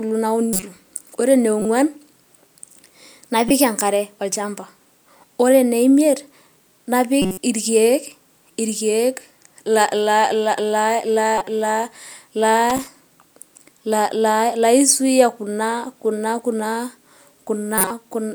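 Speech with two kinds of fault. Six short bursts are corrupt frames decoded: 0.53–0.63 s, 1.60–1.65 s, 3.44–3.51 s, 7.22–7.39 s, 11.38–11.48 s and 17.78–17.91 s. Each is a brief chirp or noisy blip lasting 50 to 170 ms, which points to a run of a few damaged compressed frames. The decoder played the flipped bits as valid data, so misread gains and codes put energy in the wrong frequencies. These bursts are loud, reaching roughly -10 to -5 dBFS, and the last one, at 17.78 s, is the strongest, at roughly 0 dBFS. At 12.70–12.87 s there is a separate, irregular burst of scratchy crackle. This is loose connector crackle: a worn or dirty contact repeatedly made and broke, chopping the signal for about 170 ms.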